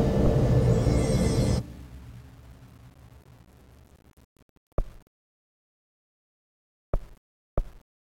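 Throughout the clip the audio carries a grainy, rasping distortion that rises and falls with the material, roughly 35 dB below the signal level. Quiet passages turn coarse, and the faintest parts break into a gritty sputter or drop out. The likely cause is low bit depth without dither: the samples were rounded to 8 bits with no added noise, so the quantisation error tracks the waveform instead of spreading as a steady hiss.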